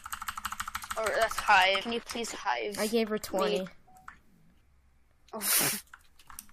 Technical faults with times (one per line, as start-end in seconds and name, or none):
1.80 damaged data in a compressed stream